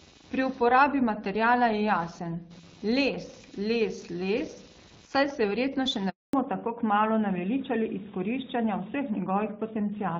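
Computer activity noise runs through the whole recording. Load swings in the computer's processor, graphics card or mouse are disturbing the ground shared with the audio circuit, and that electrical disturbance leaks into the signal. It comes through as a buzzy, chirping rasp that pulses at roughly 300 Hz, sitting about 25 dB below the speech. Its rise and fall follows the machine's workload rather than anything in the speech.

At 6.09 s a handover gap cuts the audio. The phone was switching the call from one network to another, and during the changeover no speech frames reached the far end. The sound fades out within a few tens of milliseconds and stays silent for 240 ms, until 6.33 s, when the new link begins carrying audio again. Whatever was said inside that window is gone for good.

From 6.33 s to the end, the call has fallen back to narrowband. After the handover the connection left the wideband HD Voice codec, whose light coding texture in the first six seconds fits AMR-WB at 12.65 kbit/s. 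It dropped to an older narrowband codec, and the sound is consistent with AMR-NB at 12.2 kbit/s. Nothing above 4 kHz survives. The speech turns duller and more muffled, with a rougher quality than before the switch.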